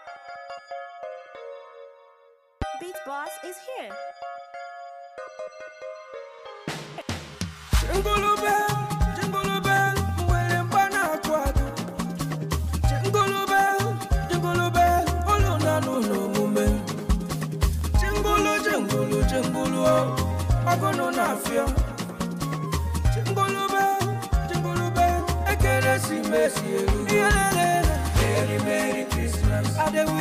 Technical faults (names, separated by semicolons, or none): loud pop